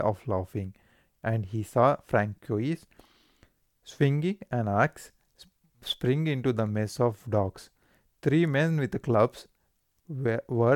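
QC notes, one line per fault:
No technical faults were found in the signal.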